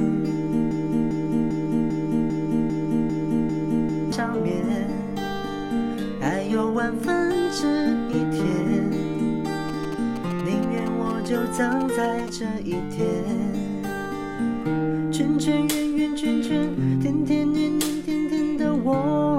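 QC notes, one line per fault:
0.71 to 4.12 s, broken-record loop. A fragment of about 0.40 s repeats exactly, back to back, nine times. Each pass is identical, so the sound stutters in a rigid, mechanical rhythm instead of moving on. The likely cause is a stall in the player, encoder or stream, which kept resending the last block it held. Whatever should have played during these 3.4 seconds is gone and cannot be recovered from the clip.
9.69 to 12.29 s, GSM signalling bursts. A galloping dit-dit-dit pattern of short buzzes sits on top of the audio. The buzz is pitched at about 217 Hz, the burst rate of a 2G phone transmitting nearby. The bursts are grouped, which fits a handset signalling with the network rather than carrying a call. The audio circuit rectified the radio energy into sound. The interference sits roughly 15 dB below the main signal.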